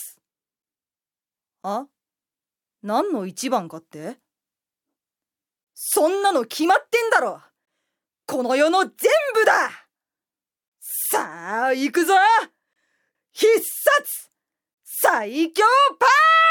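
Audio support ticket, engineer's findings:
Gap between stream segments at 1.63, 5.64, 7.65, 10.68, 12.73 and 14.74 s: silent holes of 15 to 32 ms on 1 s segment boundaries. Timestamp gap filled with silence by the player. Flat, silent waveform, hard-edged full-band blank spectrogram stripes.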